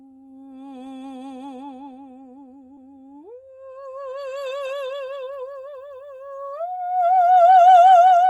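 At 2.75 to 2.79 s there is a short concealed packet loss. About 20 ms of the music arrived too late for the decoder, and the receiver filled about 13 ms of it by extending the preceding sound before blending back into the real signal. This leaves a brief smear or wobble in the music.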